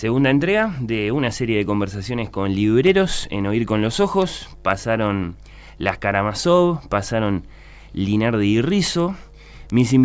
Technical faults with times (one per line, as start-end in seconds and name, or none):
8.70-10.04 resampler restarted on every block